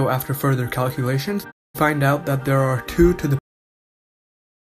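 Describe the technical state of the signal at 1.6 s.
At 1.6 s the signal is muted by a digital broadcast dropout running from about 1.50 to 1.76 s. The receiver stopped getting usable frames, through signal loss or failed checksums, and silenced its output until valid frames returned. The sound fades out over about 20 ms and stays silent for roughly 224 ms, which fits about seven lost frames. The programme then resumes mid-stream, and the missing audio is not recovered.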